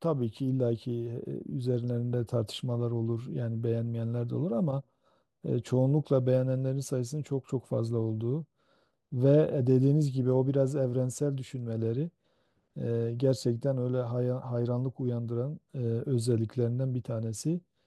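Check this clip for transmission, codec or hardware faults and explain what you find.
Nothing stood out on listening to this speech recording.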